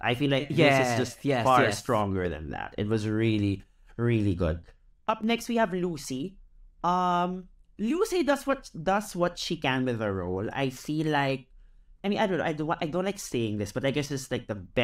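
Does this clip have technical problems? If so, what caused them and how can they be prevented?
Yes. The speech abruptly falls by about 6 dB from 5.10 to 5.24 s and again from 14.06 to 14.11 s, then snaps back to full level. This is likely one channel drops out: one side of a stereo feed briefly loses its signal, so the mono sum keeps only half of what both channels shared. Unlike a full dropout, the sound never goes silent; it only steps down by a fixed amount. Secure stereo cables and connectors, and check both channels before summing to mono.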